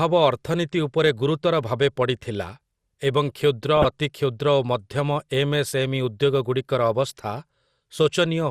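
From the start the whole recording has a dull, gurgly quality, with a granular roughness under the speech that's easy to hear. That's MP2 compression, most likely at a low rate that fits about 80 kbps. MPEG Layer II divides the signal into sub-bands and rations bits among them. At this rate the top bands get starved and drop out, and whatever survives is quantised coarsely, so the sound loses its sparkle.

Then from 3.77 to 3.91 s there's a short burst of DAB burbling, a quick splutter laid over the speech. It sounds like weak reception, with a low bit error rate of a fraction of a percent letting errors slip past the error correction into the audio data. Corrupted samples put short blips of noise into single sub-bands, and corrupted scale factors make sub-bands jump in level. The length fits a handful of consecutive frames being hit.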